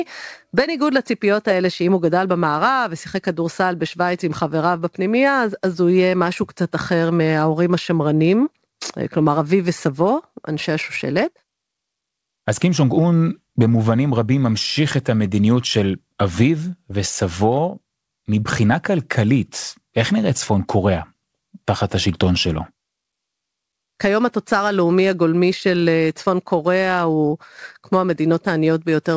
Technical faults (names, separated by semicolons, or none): none